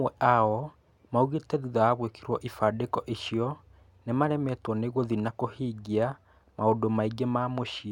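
No technical faults can be heard anywhere here.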